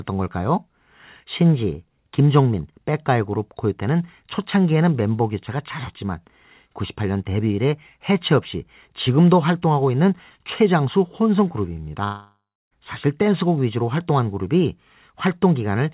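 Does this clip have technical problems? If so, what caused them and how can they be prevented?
Yes, there's a long network dropout from 12.04 to 12.74 s, likely from packets never arriving. The receiver smears the last sound into a fading buzz, then it goes near-silent, and about 0.68 s of audio is simply gone. A steadier connection or stronger packet-loss protection would prevent it.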